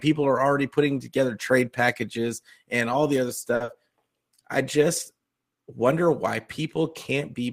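At 3.55 s the speech hits a short stall from a late packet, lasting until 3.63 s. A packet arrived behind schedule, the jitter buffer drained, and the receiver held the last sound for about 50 ms before resuming exactly where it left off, so nothing is lost but playback now runs 50 ms later. It is heard as a sound drawn out slightly too long. On a spectrogram the harmonics run flat and unchanging across that span, and the waveform shows a repeated, evenly shaped cycle.

Almost immediately after, from 3.64 to 3.71 s, comes a short concealed packet loss. About 40 ms of audio never reached the decoder in time, and the receiver covered the gap by extending the preceding sound and then crossfading into the real signal. This time the 40 ms are genuinely gone, so it comes across as a brief smear or wobble. A spectrogram shows a blurred, smoothed patch with softened onsets.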